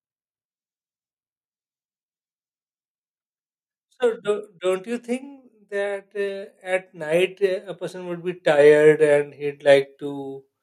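From 3.97 s to 10.0 s the level climbs steadily. This is automatic gain rising. The gain control judged the input too quiet and kept turning it up, by about 19 dB in total. The change is slow, spread over six seconds, so there is no jump. The speech grows louder. The background noise swells right along with it, which shows the whole signal was boosted, not the talker.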